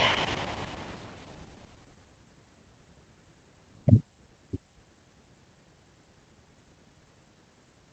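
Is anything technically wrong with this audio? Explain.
No, nothing is technically wrong: the speech came over a normal WebRTC call path, with the Opus codec's usual coding character and high frequencies stopping at about 8 kHz, as expected for that route.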